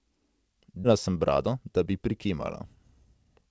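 A speech recording sent over a call path, where a run of audio was dropped, on the way or by the receiver's jitter buffer, while later audio was already waiting, producing a skip ahead at 0.84 s. Roughly half a second of speech is simply gone, with no filler inserted, so the sound on either side of the cut is butted together almost seamlessly and the delivery lurches forward mid-flow. Immediately afterwards the buffer was still holding more audio than its target, so from 0.92 s to 3.42 s it kept trimming tiny slices of one or a few pitch periods to drain the backlog. That jitter buffer speed-up runs the speech at about 108 percent with the pitch unchanged, shaving roughly a fifth of a second overall and leaving the rest of the clip sounding slightly rushed. The band stops at 8 kHz throughout, which fits the G.722 wideband codec at 64 kbps.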